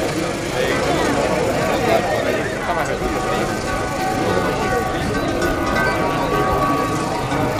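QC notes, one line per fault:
throughout, resampler restarted on every block: a steady 100 Hz buzz present only with signal, because each 10 ms block is resampled alone, leaving an error at every edge.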